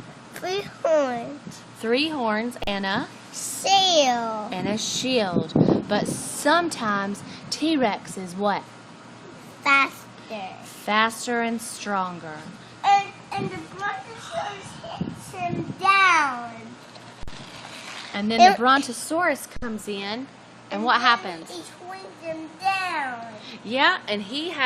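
Three brief silences open in continuous audio at 2.64 s (37 ms), 17.23 s (48 ms) and 19.57 s (58 ms). These are gaps at joins of encoded pieces, where encoder start delay and final-frame padding were left in. Unlike a dropout, the sound resumes exactly where it stopped. A DC offset runs throughout, shifting the whole waveform off zero. Unlike hum, it isn't heard directly; it shows as steady energy at the bottom of the spectrum and uses up headroom.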